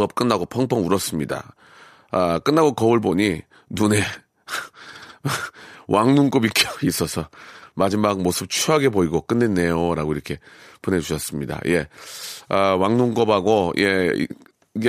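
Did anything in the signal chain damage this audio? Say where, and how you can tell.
No, nothing in this speech recording stood out on listening as a sign of damage anywhere in the chain.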